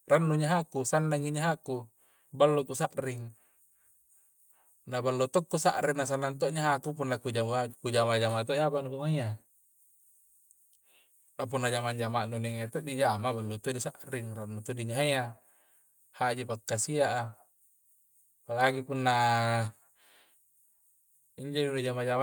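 A speech recording with no technical faults to report. Nothing in it needs a time or a cause noted against it.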